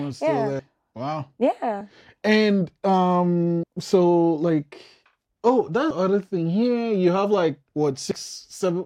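Speech with compressed frames skipped at 0.59, 1.81, 3.63, 5.90 and 8.11 s. Missing or rejected frames, consistent with 32 ms frames, drop roughly 30 to 150 ms each time. On a spectrogram or waveform, each skip shows as a join where the sound jumps ahead.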